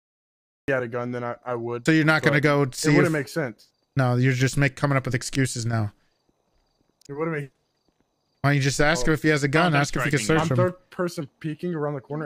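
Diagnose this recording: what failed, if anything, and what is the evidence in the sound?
The capture began late, a cut-off start at the driver or buffer stage. The first 0.68 s is digital silence, then the audio appears abruptly mid-sound with no attack or fade-in. Unlike a dropout, nothing precedes the gap, and unlike gating, the onset isn't ramped.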